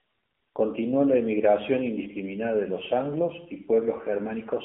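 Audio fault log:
throughout: AMR narrowband mobile codec. The speech sits in a band from 200 Hz to 3.7 kHz, so it sounds thin and boxy. A vocal-tract model driven by sparse pulses gives a plainly buzzy, synthetic edge, which fits a low mode near 7.4 kbps.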